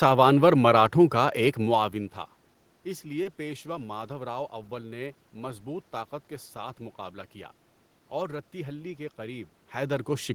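At 3.23–3.27 s a sound hangs with a slight buzz: a short stall from a late packet, the emptied jitter buffer stretching 20 ms, nothing lost.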